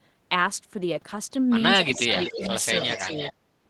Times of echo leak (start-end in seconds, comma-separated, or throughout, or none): 1.85-3.33